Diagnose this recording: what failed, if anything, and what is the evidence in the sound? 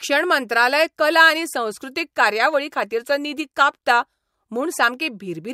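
Nothing in the signal chain failed; the speech runs without a break, dropout or discontinuity at any stage.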